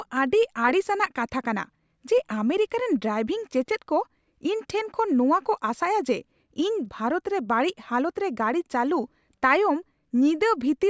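Speech recording with no audible technical faults.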